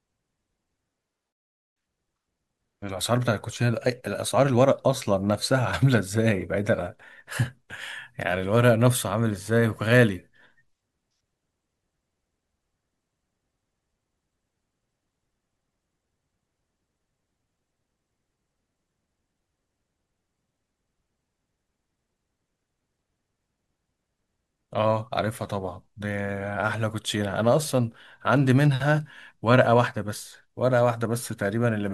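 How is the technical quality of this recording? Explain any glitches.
No glitches to report: the speech recording runs without any audible technical faults.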